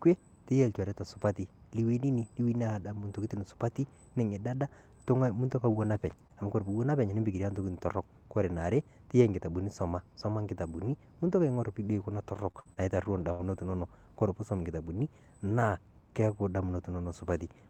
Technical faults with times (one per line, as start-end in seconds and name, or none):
5.71-5.75 short concealed packet loss
5.73-6.11 lost packet rebuilt from error correction
6.27-6.31 short concealed packet loss
6.41 lost packet rebuilt from error correction
12.35-13.83 repeated packet loss (robotic sound)